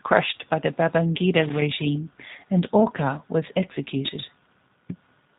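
Throughout, the speech sounds narrow, slightly rough and synthetic, with no content above 4 kHz. That is the G.729 codec. It rebuilds each short frame from a vocal tract model, a pitch predictor and a few pulses, which fits an 8 kbit/s G.729A stream.

From 1.41 to 1.62 s, an irregular burst of scratchy crackle chops through the audio. This is loose connector crackle. A worn or dirty contact briefly made and broke the signal path, interrupting the signal.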